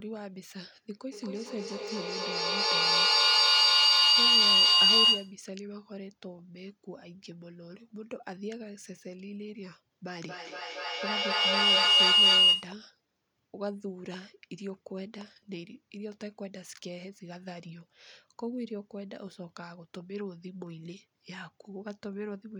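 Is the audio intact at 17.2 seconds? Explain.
Yes, the audio is intact at 17.2 seconds, with the speech running through that moment without any audible fault.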